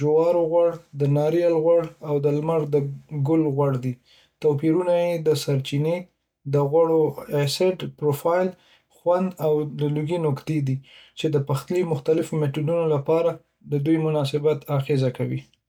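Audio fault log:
2.94 s, 5.32 s, 14.20 s, dropped samples: likely a few samples lost from the stream, so the waveform jumps abruptly, heard as three single sharp clicks in the speech.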